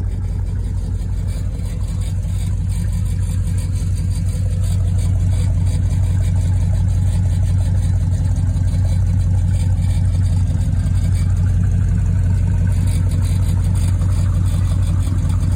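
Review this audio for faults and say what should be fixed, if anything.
Nothing stood out on listening, so there is nothing here that needs fixing.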